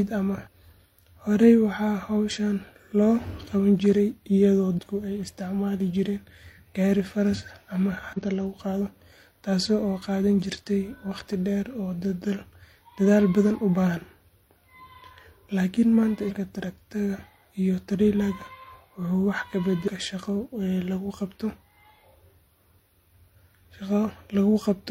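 Damaged data in a compressed stream makes the decoder misread frames and lose sync, producing brief disturbances in the speech at 0.42–0.48, 4.74–4.79, 8.13–8.18, 16.26–16.32 and 19.83–19.88 s.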